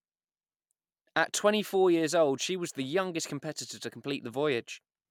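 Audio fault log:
No faults detected in the speech; the audio path holds steady with nothing to log.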